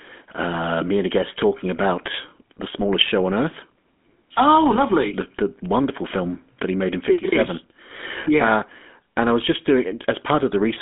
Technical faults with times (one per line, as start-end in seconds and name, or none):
0.00-10.81 GSM full-rate codec